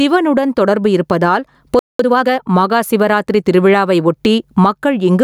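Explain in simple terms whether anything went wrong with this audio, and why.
Three things went wrong in this speech recording.

The first runs through the whole clip: gain pumping. The recording level was likely set much too high for the microphone, so an automatic level control kept pulling the volume down hard every time the voice got loud. The result is a large up-and-down swing that leaves loud and soft parts closer in level and everything sounding squashed and breathing.

The second is a playback stall from 1.79 to 1.99 s. The player likely ran short of audio to play, or was briefly held up, so it had nothing to send out. The speech simply stops dead in mid-flow for about a fifth of a second, a short but clearly noticeable gap, before it carries on.

The third follows straight after, from 1.99 to 2.39 s: time-compressed catch-up. Having fallen behind during the gap, the player made up the lost time by snipping out tiny slices of audio and blending the edges together. 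For that stretch the speech runs about 1.5 times faster than normal but keeps its usual pitch, so it sounds hurried.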